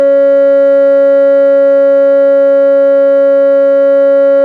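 No technical faults can be heard anywhere in this music.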